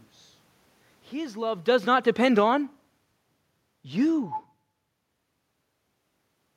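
From 1.22 s to 3.41 s the automatic gain falls. The control treated the input as too loud, or its background noise as too strong, and lowered its gain gradually, by about 11 dB. The speech begins loud and then sinks steadily, and the room noise sinks along with it. The level changes around 1 s and 5.5 s come from the talker moving relative to the microphone.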